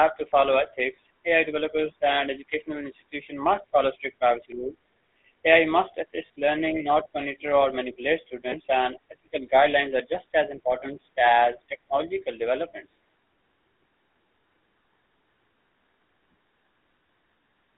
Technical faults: GSM full-rate codec; lost GSM frames

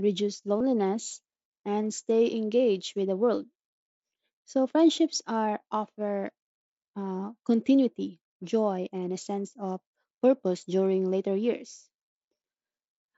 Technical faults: concealed Bluetooth headset packet loss

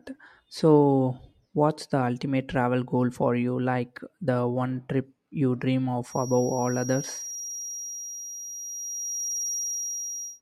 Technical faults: feedback whistle

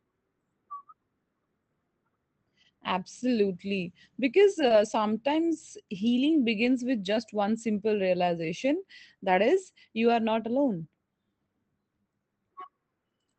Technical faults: short concealed packet loss

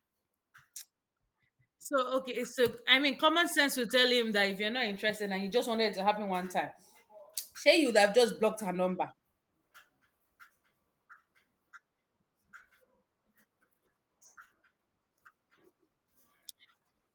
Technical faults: none

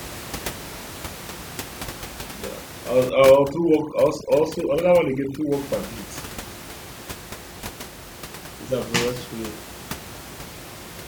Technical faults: overdone noise removal

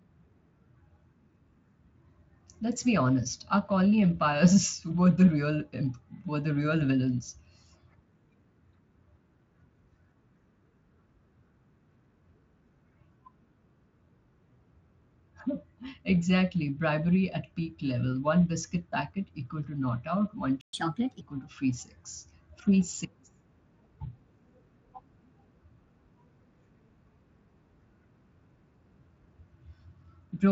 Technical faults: playback stall; catch-up at higher speed

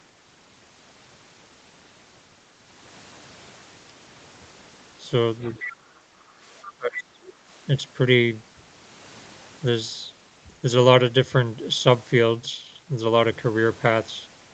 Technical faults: other side's voice leaking through; speech suppressed in double talk; background gated by the echo canceller

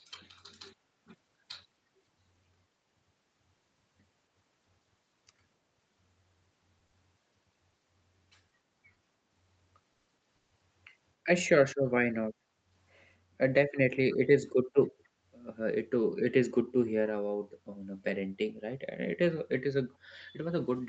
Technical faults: repeated stalls (stutter); jitter buffer speed-up

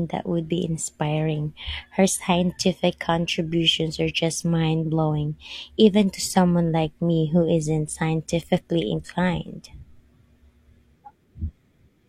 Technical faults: none

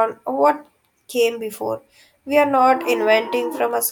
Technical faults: none

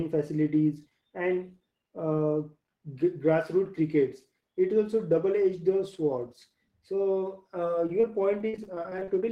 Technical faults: repeated packet loss (robotic sound)

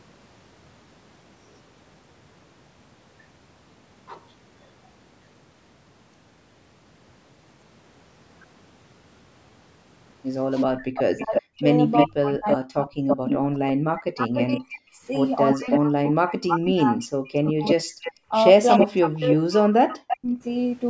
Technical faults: echo leak; speech suppressed in double talk

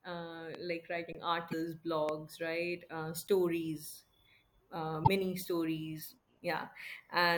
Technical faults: loud pop; underrun with held sample; damaged data in a compressed stream

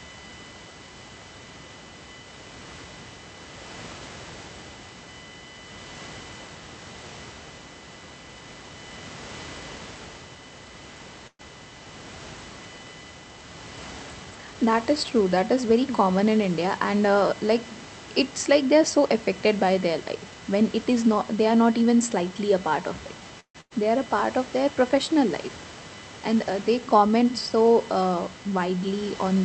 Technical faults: USB whine; call audio freeze; jitter buffer speed-up; burst of packet loss

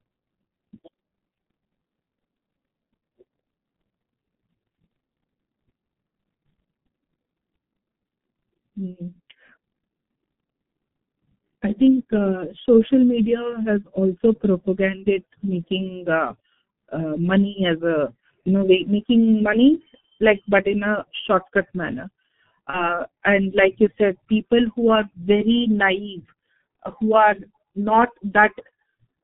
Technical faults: G.723.1 codec; VoIP packet loss concealed by the speech codec

